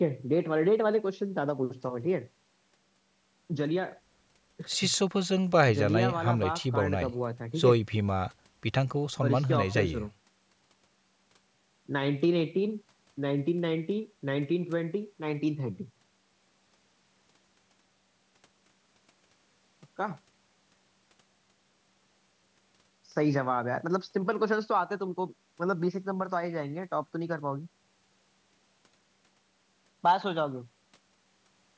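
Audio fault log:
No faults found; the speech carries the normal call microphone processing, with the lowest bass trimmed by its high-pass filter and no content above 8 kHz.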